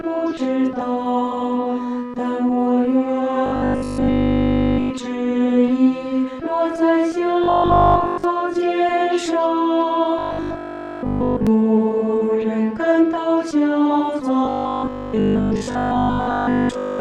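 Four stretches of robotic sound from repeated short buffers occur, at 3.46–4.92 s, 7.44–8.24 s, 10.19–11.47 s and 14.45–16.99 s. Each carries a rigid 50 Hz buzz, which fits a 20 ms segment looped while fresh audio likely arrived too slowly. The first and third are fully repeated, the others mostly.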